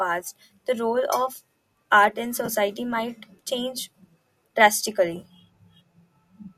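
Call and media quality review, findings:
AAC frame loss with concealment: brief smeared, phasey patches at 0.46–0.49 s, 2.46–2.49 s (between "art in" and "might change") and 5.20–5.25 s. Gaps of about 30, 20 and 30 ms fit two to three 10 ms low-delay AAC frames, likely AAC-ELD, refilled from the last good spectrum. Spectrogram: short blurred vertical strips, harmonics washed into noise. Waveform: no drop to zero, just a brief irregular envelope.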